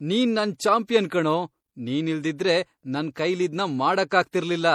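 Right through the speech there's a layered, smeary coding texture with nothing above about 20.4 kHz, likely transcoding between lossy codecs, an MP3-style pass re-encoded as HE-AAC.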